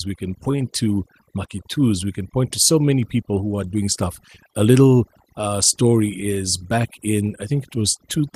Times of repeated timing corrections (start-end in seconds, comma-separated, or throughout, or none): 0.08-8.33